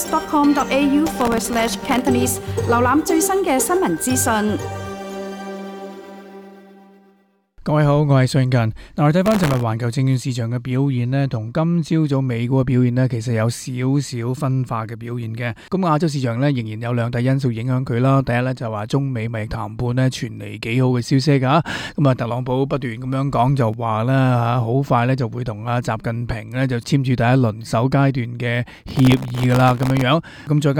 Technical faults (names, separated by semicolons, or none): processor overload crackle